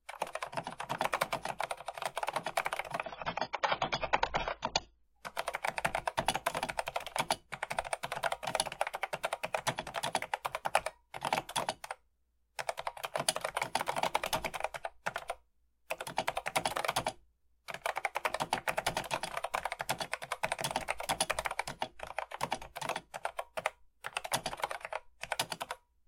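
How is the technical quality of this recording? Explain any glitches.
The quality dips once, briefly. From 3.04 to 5.04 s the sound turns dull, with nothing above 7.1 kHz and audible codec artefacts, then snaps back with no gap. That is an adaptive stream switching to a lower bitrate when the connection slowed; the sound points to roughly 16 kbit/s AAC instead of about 96 kbit/s.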